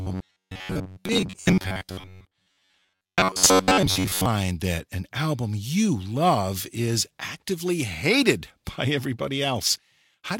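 From 0.01 s to 4.26 s, ending just before "that an album you", the speech has robotic sound from repeated short buffers: a rigid metallic buzz fixed at 93.8 Hz that still tracks the words loosely. The likely cause is audio arriving too seldom, so a roughly 10.7 ms slice is looped for most of that stretch while the real signal is skipped. Unlike a pitch shift, the buzz stays locked at one pitch instead of following the intonation.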